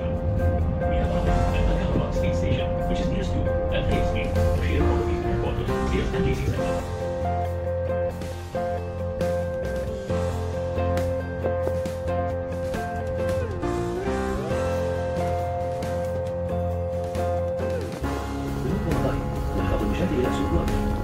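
From 17.94 s to 21.01 s, a train of clicks runs over the sound. About 13 pulses per second arrive at an uneven pace, some forty in all. They peak roughly level with the audio. The likely cause is interference or a faulty connection or power supply.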